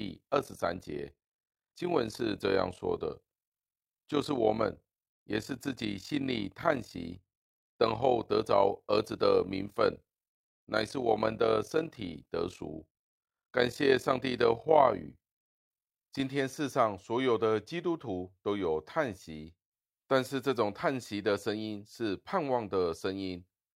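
From 0 to 16.2 s, overlap-add ripple pulses the speech about 11 dB at around 40 Hz, a rough fast flutter, seen as regular waveform envelope dips.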